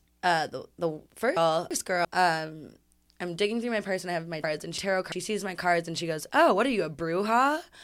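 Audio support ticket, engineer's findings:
Chunks out of order, 1.37–2.05 s, after "uh the the": two 0.34 s blocks swapped, so the later one plays first. Three hard joins, jumbled sound. Probable component: buffer/write queue, one chunk one slot late; 0.34 s chunk size.

Same fault, 4.44–5.12 s, between "and I have my" and "sees my cards and": identical 0.34 s swap, one chunk late. Differs from dropout or stutter: nothing missing, nothing repeated, only misordered.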